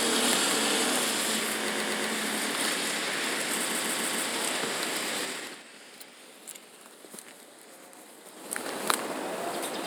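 Repeated frames: a 120 ms block of compressed frames plays three extra times from 1.72 to 2.08 s, then a 144 ms block four more times from 3.69 to 4.26 s, giving audible stutters that lengthen the audio.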